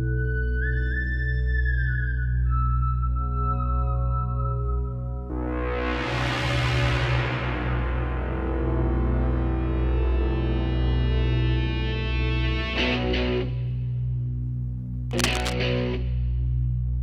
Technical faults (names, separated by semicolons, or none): cable scratch noise